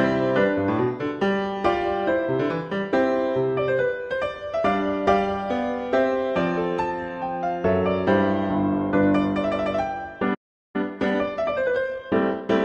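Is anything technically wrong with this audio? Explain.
Yes. There are two related faults near the end of the clip, a playback stall followed by a stretch of time-compressed catch-up.

From 10.34 s to 10.76 s there is a playback stall: the audio cuts off abruptly mid-flow and the output stays silent for about 0.40 s. The likely cause is the player's buffer running empty or its output thread being blocked, so no samples reached the device until it recovered.

From 10.76 s to 12.62 s, immediately after the stall, there is time-compressed catch-up. The player works off the backlog built up during the gap by removing short segments and cross-fading across the joins, which plays the material at about 1.15 times normal speed. Pitch stays unchanged, but the sound comes across as hurried.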